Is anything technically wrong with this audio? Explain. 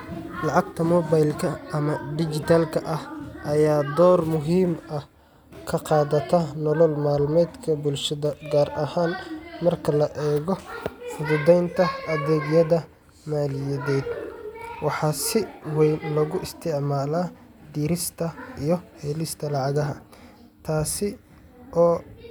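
No, nothing technically wrong can be heard in this speech recording. There is no fault to point to at any moment in it.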